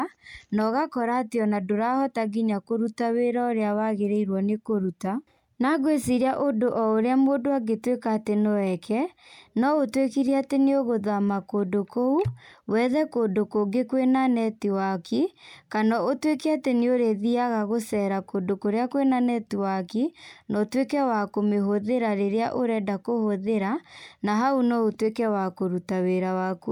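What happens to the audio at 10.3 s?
Nothing goes wrong at 10.3 s: the speech carries on intact through that moment, with no dropout, click or distortion to be heard.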